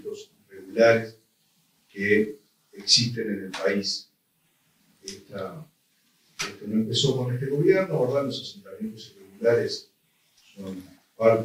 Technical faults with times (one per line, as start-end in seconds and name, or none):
none